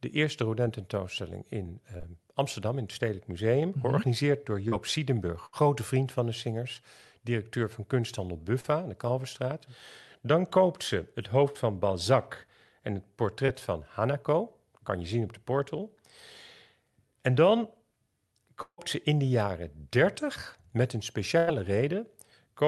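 At 1.97 to 2.06 s and 4.68 to 4.74 s comes short concealed packet loss: 20 to 40 ms of audio missed the decoder, and the receiver extended the preceding sound to cover it. Each is a brief smear or wobble, seen as a smoothed, briefly repeated patch in the spectrogram.

At 5.46 to 5.55 s a burst of packet loss removes about 60 ms. The concealment holds the last sound as a buzz or hiss that decays, a fading band of repeated harmonics on a spectrogram, before the audio resumes further on.

Further short concealed losses of 40 ms and 20 ms follow at 8.61 to 8.66 s and 13.46 to 13.50 s.

At 18.62 to 18.80 s the sound turns into a fading buzz or hiss and then about 70 ms of near-silence, a flat gap in the waveform, with about 160 ms missing. The likely cause is a long network dropout.

At 21.38 to 21.52 s a second burst of packet loss drops about 100 ms, again heard as a decaying held sound before the audio returns.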